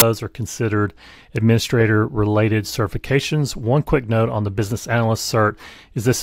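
A hard-edged burst of very loud white noise at 0.0 s is file tags played as audio: an embedded cover picture's compressed data is decoded as samples.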